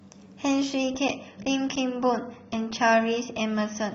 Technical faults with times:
0.85-3.95 adaptive stream at a lower bitrate

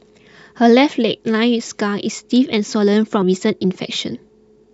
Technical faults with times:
3.22 compressed frames skipped

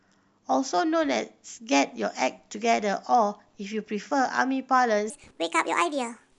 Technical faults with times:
5.10-6.39 section at the wrong speed

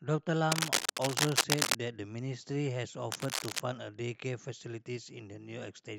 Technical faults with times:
0.52-1.77 cable scratch noise
3.12-3.60 cable scratch noise

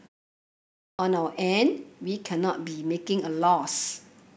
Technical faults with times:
0.53-0.99 clipped start after a pause

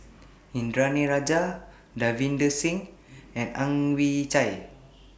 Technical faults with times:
none

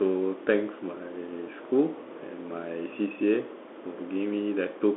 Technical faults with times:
0.00-4.97 Bluetooth CVSD headset codec

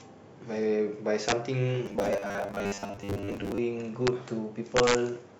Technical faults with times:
1.29-1.32 integer overflow
1.86-3.58 robotic sound from repeated short buffers
4.07 integer overflow
4.77-4.95 integer overflow

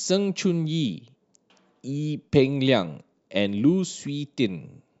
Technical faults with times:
none

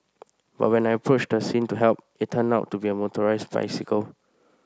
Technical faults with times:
none

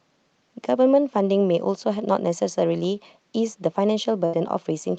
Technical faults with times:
4.25-4.35 burst of packet loss

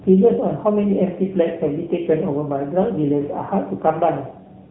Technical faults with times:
0.00-4.71 AMR narrowband mobile codec

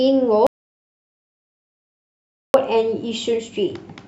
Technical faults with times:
0.47-2.54 audio dropout to silence

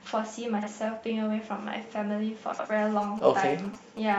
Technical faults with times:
0.58-0.68 frames out of order
2.53-2.66 frames out of order
3.03-4.14 GSM signalling bursts

